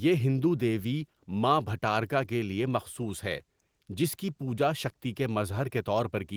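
No technical faults can be heard anywhere in the recording.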